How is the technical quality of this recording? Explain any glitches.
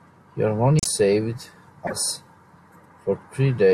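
The recording has two brief glitches in the speech. The likely cause is a broken MP3 bit reservoir, at 0.78 to 0.87 s and at 1.86 to 1.93 s. After missing frames, the next frames reached back for borrowed data that wasn't there. The speech jumps ahead and is briefly garbled, in bursts that fit 24 ms frames.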